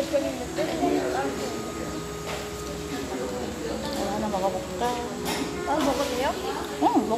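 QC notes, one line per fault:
No technical faults are audible in the signal, with level, frequency balance and continuity holding steady across the whole recording.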